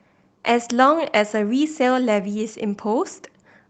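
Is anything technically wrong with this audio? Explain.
No, nothing is technically wrong with this speech recording: it shows the expected character of a voice-call path, with content reaching up to about 8 kHz, consistent with a wideband call codec like Opus running at a modest bitrate.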